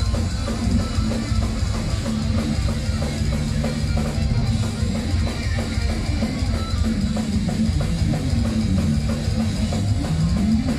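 No technical faults can be heard anywhere in this clip.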